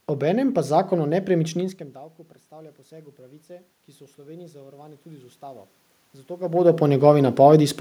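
From 2.49 to 5.72 s there's automatic gain rising: the input had dropped about 23 dB, around when the talker moves back near 1.5 s, so the control slowly adds about 5 dB, and the voice and room noise swell up together.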